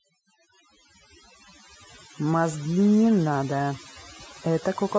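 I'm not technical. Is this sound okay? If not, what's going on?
No. Overdone noise removal runs throughout: the background drops and breaks up into twinkling specks, unlike simple muffling.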